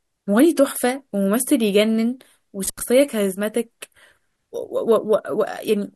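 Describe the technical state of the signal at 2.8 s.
At 2.8 s the signal is at the tail of an intermittent contact fault spanning 2.65 to 2.83 s. A loose connection briefly opens the line for about 80 ms, so the speech drops out, leaving faint hiss, with crackle as contact breaks and remakes.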